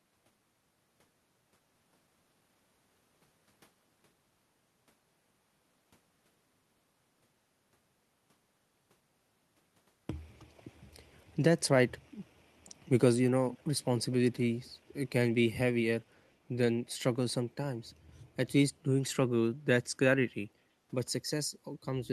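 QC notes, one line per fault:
1.75–1.77 s, skip ahead: the speech jumps forward with no gap, roughly a second missing, because audio was dropped while later audio already waited.
1.85–2.56 s, jitter buffer speed-up: speech sounds hurried at unchanged pitch, running at 109% as the receiver trimmed short pitch-period pieces, around 70 ms in total, to shrink its backlog.
13.51–13.63 s and 14.11–14.31 s, echo leak: a faint delayed copy of the speech, about 20 dB down and trailing by 248 ms, likely from a loudspeaker echo the far end's canceller missed.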